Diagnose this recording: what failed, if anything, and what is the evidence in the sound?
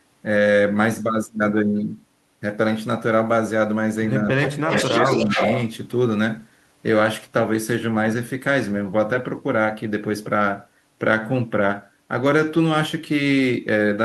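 Call processing failed here, as speech suppressed in double talk. The speech dips from 4.31 to 4.71 s, about 30 dB at its deepest. It dips again from 4.87 to 5.4 s, by about 10 dB. The likely cause is an echo canceller that could not separate the talker from the echo while both sides spoke, so it turned both down.

Echo leak also occurs at the call processing stage. A delayed copy of the speech, 259 ms behind the original, appears from 4.37 to 4.51 s at about 10 dB below the speech. It returns from 4.69 to 5.6 s, louder, at about 5 dB below. This is likely loudspeaker pickup that the far end's canceller did not fully remove and sent back.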